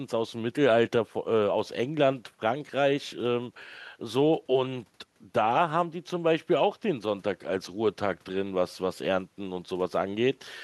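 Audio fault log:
No faults are audible anywhere in the speech recording, and the signal holds steady without any technical disturbance.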